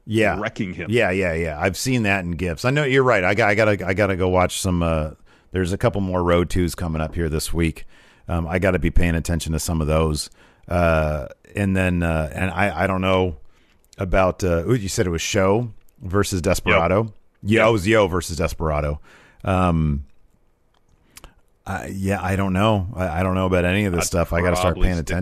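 Around 12.39 to 12.42 s, AAC frame loss with concealment leaves a brief smeared, noisy patch where about 20 ms of audio, consistent with two lost frames, was rebuilt from the preceding spectrum. It shows as a blurred vertical smudge on a spectrogram.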